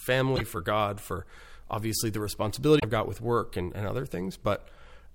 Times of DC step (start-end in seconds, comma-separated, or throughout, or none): none